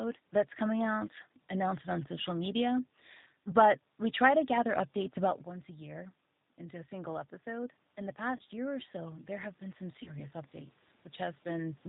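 A speech recording runs through the G.729 codec from start to finish, and the coding damage is plainly audible. The voice sounds slightly rough and synthetic, and the room noise behind it warbles instead of holding steady. That fits an 8 kbit/s CELP-type coder, which rebuilds speech from a vocal tract filter, a pitch predictor and a few pulses per frame rather than preserving the waveform. On a spectrogram, energy stops sharply at 4 kHz, and the harmonics and noise floor look smeared and patchy from frame to frame.

Around 5 s the talker seems to move relative to the microphone, and the level changes. From 6.59 s to 10.39 s the automatic gain rises. The controller is responding to input that has fallen by about 11 dB and lifts its gain by about 7 dB over nearly four seconds. Voice and background swell together, and the waveform envelope and the noise floor between phrases both climb gradually.

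VoIP packet loss concealed by the speech codec occurs at 8.36 to 8.41 s and again at 10.03 to 10.11 s. Each time, about 30 ms of audio is missing, which fits a single lost packet. The decoder fills the gap by extending its last pitch and filter, so the sound is stretched into a buzzy tone or coloured noise that fades, and the voice stays weak or distorted just afterwards. On a spectrogram this shows as a short stretch of smeared, fading energy.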